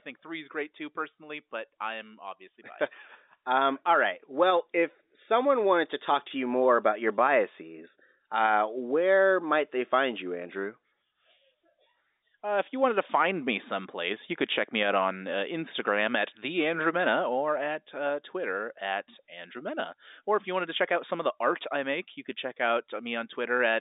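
No technical faults can be heard in this speech, which comes through as ordinary telephone-band audio with nothing above about 3.8 kHz.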